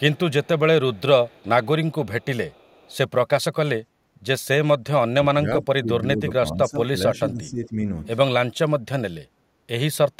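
From 0 to 0.19 s, then at 0.44–0.6 s, 0.94–1.02 s, 1.25–1.68 s, 2.21–2.26 s and 2.5–2.97 s, an echo leak is audible: a very faint delayed copy of the speech, roughly 35 dB under the direct signal and trailing it by 416 ms, arriving in short scraps. The likely cause is a far-end loudspeaker feeding its microphone, with the echo canceller failing to subtract the whole return path, so residual echo was transmitted back.

Between 5.21 and 6.9 s, and again from 7.06 to 7.77 s, the speech is suppressed in double talk. Level falls by as much as around 20 dB in the first stretch and around 15 dB in the second, and the speech thins and drops out in pieces. This is likely the echo canceller treating overlapping talk as echo and attenuating the near-end talker along with the loudspeaker signal.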